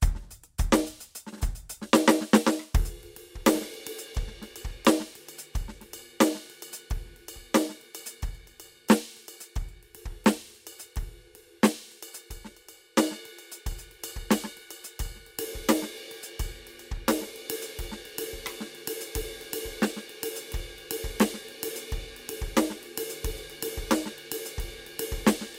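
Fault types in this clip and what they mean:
No faults can be heard anywhere in this music.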